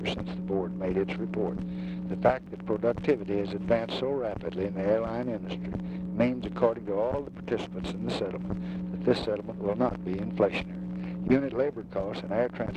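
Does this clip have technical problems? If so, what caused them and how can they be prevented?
Yes: a gap between stream segments at 2.46 s, where mismatched segment timestamps left a 3.4 ms hard-edged silence that the player filled. Unlike a dropout, no audio is lost. Aligning segment timestamps at each 2.0 s boundary, so every segment starts exactly where the previous one ends, prevents it.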